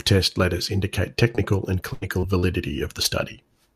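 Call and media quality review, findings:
Short concealed packet loss at 1.35–1.39 s after "letters indicate", 2.19–2.25 s, 2.39–2.45 s and 3.03–3.06 s. Brief smears. Jitter buffer and decoder concealment extend the last sound over 16–40 ms gaps.

Burst of packet loss at 1.93–2.03 s. Network drops about 80 ms in a row. The receiver holds and fades the last sound, then resumes with that stretch gone.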